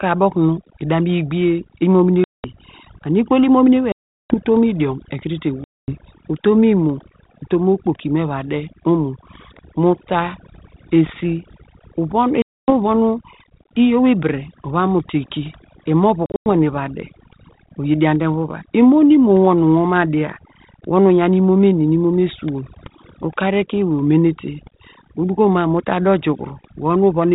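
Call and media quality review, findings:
Overdone noise removal, throughout the clip. The background drops and breaks up into twinkling specks. The denoiser is set too aggressively and cuts bands near its noise estimate, taking quiet speech components with them.

Packet loss on an ADPCM call, at 2.24 s (200 ms), 3.92 s (380 ms), 5.64 s (240 ms), 12.42 s (260 ms) and 16.26 s (160 ms lost, scattered over 200 ms, longest run 100 ms). Each is a hard-edged silent hole, roughly seven to twenty packets dropped. On return the decoder's predictor and step size are out of sync with the sender, so speech resumes slightly distorted before settling.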